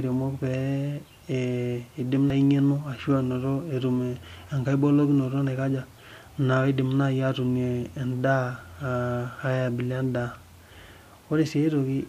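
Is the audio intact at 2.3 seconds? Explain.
No. At 2.30 s the speech is hit by damaged data in a compressed stream. Bytes in the encoded file are wrong there, so the decoder misreads the affected frame, loses sync and hunts for the next valid frame header before carrying on. The result is a very brief chirp or blip cutting into the speech. On a spectrogram it shows as a thin vertical streak of broadband energy, and the waveform has an abrupt discontinuity at that instant.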